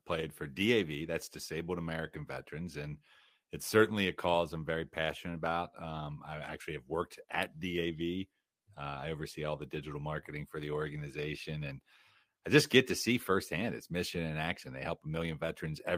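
Listening closely to the speech, nothing stood out as a technical fault at any point.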